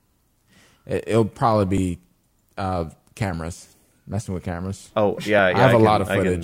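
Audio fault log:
1.78 s and 5.39 s, dropped buffer (overrun): an abrupt skip forward, likely from a buffer overwritten before it was read, losing about 20 ms and 10 ms, with no silent gap as an underrun would leave.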